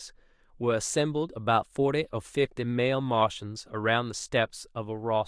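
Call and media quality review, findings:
No faults found in the speech recording. Nothing heard warrants a ticket entry.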